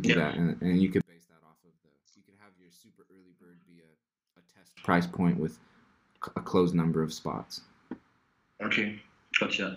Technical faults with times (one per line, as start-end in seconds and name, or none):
1.01-4.77 one channel inverted